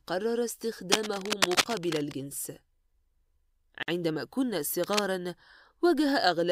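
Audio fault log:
0.92 to 2.13 s and 4.84 to 5.01 s, cable scratch noise: Dense, uneven bursts of scratching and rustling sit over the speech, first for about 1.2 s at roughly the level of the speech itself, then for a brief 0.17 s a little quieter. The likely cause is a worn cable, connector or control being moved, so that its contact resistance flickers and injects ragged noise straight into the signal path.
3.83 s, gap at a join of encoded pieces: A silence of about 52 ms cuts into continuous speech. Its edges are smeared by the codec, and the speech then resumes exactly where it left off. This is a join between separately encoded pieces whose padding was never trimmed. The encoder's start-up delay and the padded final frame both survive as dead air at the seam.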